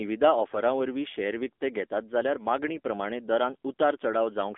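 AMR narrowband mobile codec damage runs throughout: speech is confined to about 250 Hz to 3.5 kHz, and low-rate pulse coding, fitting a 7.4 kbps mode, leaves it buzzy and synthetic.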